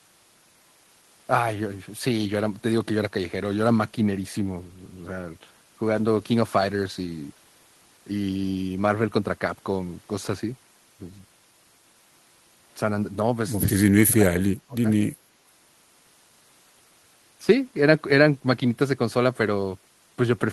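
From 13.84 to 14.86 s the speech sinks deeply, likely speech suppressed in double talk; unlike a packet dropout, it dips away rather than glitching.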